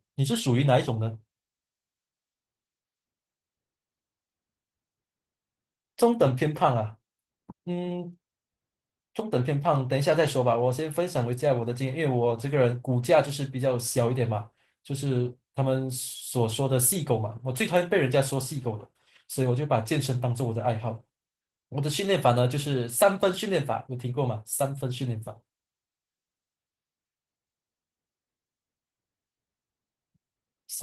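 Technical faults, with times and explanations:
Throughout, Opus voice compression. The speech sounds hoarse, slightly robotic and grainy, and the damage is plainly audible. The top end is still present. This points to a low bitrate of around 16 kbps in hybrid mode. There, a linear-prediction coder handles the lower band, and a transform layer roughly fills the highs. Too few bits reach the excitation, so detail is lost. The texture fits 20 ms frames.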